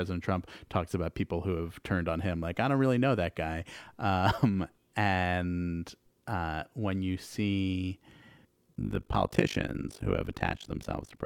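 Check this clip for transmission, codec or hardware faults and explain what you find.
One fault appears near the end: overlap-add ripple, from 8.74 s to the end of the clip. The speech was split into windowed frames and rejoined with overlapping windows that don't add up to a steady gain, so the level dips once per frame, by about 60 dB, around 50 times a second. That produces a harsh, robotic flutter. Unlike 50 Hz mains hum, no tone is added; the speech itself is chopped rhythmically.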